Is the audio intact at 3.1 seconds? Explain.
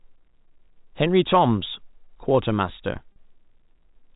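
No. At 3.12 s there is packet loss with pitch repetition, lasting 40 ms to 3.16 s, which fits two 20 ms packets going missing. The receiver fills the hole by looping the last pitch period of the speech and fading it down, so the sound briefly holds as a slightly buzzy, frozen tone before normal speech resumes. Unlike a plain dropout, there is no silent gap or click, only that short held buzz.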